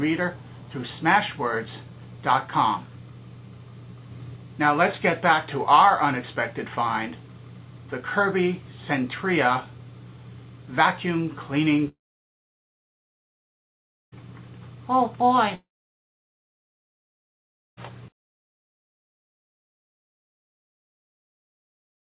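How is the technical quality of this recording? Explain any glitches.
Two gaps break the recording. From 11.88 to 14.18 s and again from 15.55 to 17.79 s, the likely cause is a long network dropout: packets stopped arriving, so the receiver stretched the last sound into a brief fading buzz or hiss, then held about 2.1 s of silence before the audio resumed with that stretch simply gone. The whole clip is band-limited, with nothing above 4 kHz, which fits a G.711 mu-law call codec at 64 kbps.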